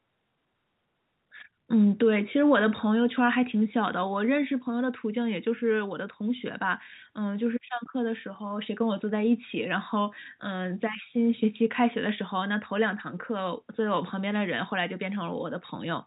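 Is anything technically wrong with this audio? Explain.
No, nothing in this speech recording is technically wrong. It carries the sound of G.711 telephone coding working as intended, with nothing above 4 kHz and only a faint hiss that rises and falls with the level of the speech.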